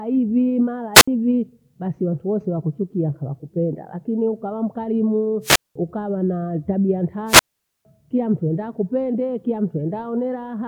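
At 0.94 s after "hivi mara", at 5.42 s after "ukawa mkarimuu", and at 7.26 s after "mkarimuu ukawa na tabia", a wireless microphone squelch dropout occurs. A fading radio signal briefly swells into hiss before the receiver mutes for about 66, 200 and 460 ms. That rising static, unlike a clean digital gap, marks it.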